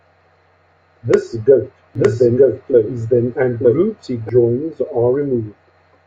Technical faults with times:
1.95-4.29 doubled audio track

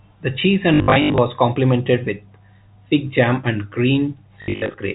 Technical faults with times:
0.74-1.18 packet loss with last packet repeated
4.42-4.74 packet loss with last packet repeated

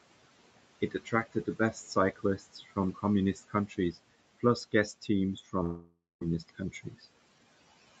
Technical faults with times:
0.00-8.00 noise suppressor artifacts
0.81-1.77 speech cut by the noise suppressor
2.16-2.77 speech cut by the noise suppressor
3.34-3.97 speech cut by the noise suppressor
5.63-6.23 long network dropout
6.48-7.04 speech cut by the noise suppressor

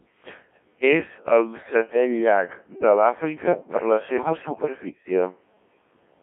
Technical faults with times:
0.00-6.22 Codec 2 vocoder
1.61-1.71 bit errors on digital voice radio
4.17-4.62 bit errors on digital voice radio

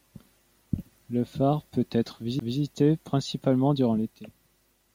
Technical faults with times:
2.39 CD skip

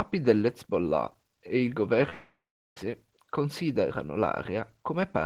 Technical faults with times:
2.09-2.77 long network dropout

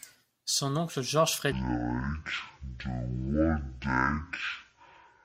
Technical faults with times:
1.52-5.24 stereo read as mono

